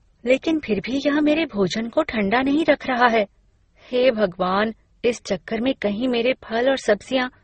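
Speech, with one fault running through the whole clip: transcoding between lossy codecs. Nothing is heard above about 8.3 kHz, so the top end is dull and closed in. Two kinds of damage sit on top of each other. There is a smeared, watery texture, and over it the swirling, metallic grit of low-rate MP3. The likely cause is Opus at a rate near 16 kbit/s, re-encoded to MP3 at around 32 kbit/s. The second coder wastes bits copying the first one's flaws.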